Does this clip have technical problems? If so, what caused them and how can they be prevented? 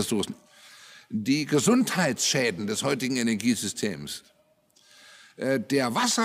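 No, the signal carries no audible technical faults, so there is nothing here that calls for a fix or a preventive measure.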